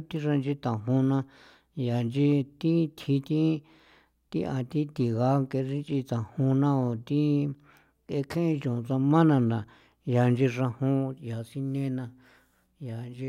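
A speech recording with nothing technically wrong to point to anywhere in it, so there's no problem here to trace back to a cause.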